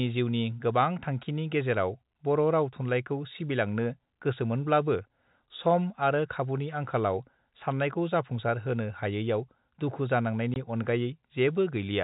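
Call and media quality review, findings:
Packet loss filled with silence at 10.54 s: single 20 ms hole in the speech, hard edges. One packet's worth, which fits a 20 ms packetisation. Packet lost, receiver just played silence, no concealment. Sits on G.711 A-law telephone coding, band stops at 4 kHz.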